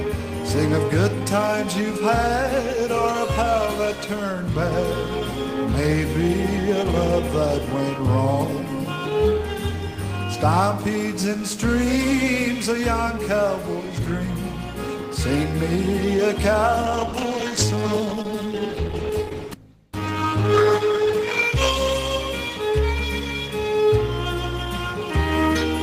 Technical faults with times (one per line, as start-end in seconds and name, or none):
16.84-22.53 call bitrate drop